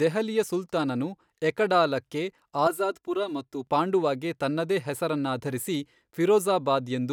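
From 2.67 to 3.67 s, after "ದೆಹಲಿಯ ಸುಲ್ತಾನನು ಎಕಡಾಲಾಕ್ಕೆ", the speech turns hollow and phasey. This is channel delay comb filtering: one channel lags about 3 ms, cutting notches from around 150 Hz upward.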